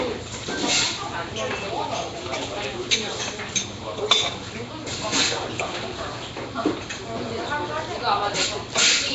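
A recording of everyday sound, carrying plainly audible codec damage from start to finish, most likely Nellymoser compression of the Nellymoser Asao kind once used for Flash microphone input. Nothing reaches above 7.7 kHz, and quieter bands are replaced by a hissy noise fill that leaves a rough halo and a smeared, underwater blur, consistent with a low fixed bitrate. Unlike the watery swirl of a low-bitrate MP3, this grit stays steady.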